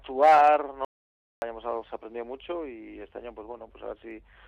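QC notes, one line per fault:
0.85–1.42 s, audio dropout to silence. The sound cuts off abruptly mid-flow and returns just as abruptly about 0.57 s later. The gap is silent, with no room tone or noise floor underneath. That points to the input itself vanishing rather than the source going quiet. The likely cause is a brief loss of the input signal while the recorder kept writing silence. Whatever sounded during that half-second is gone and cannot be recovered.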